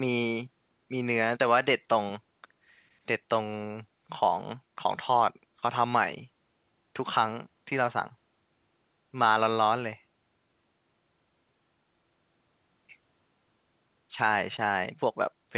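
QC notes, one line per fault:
No faults found in this clip.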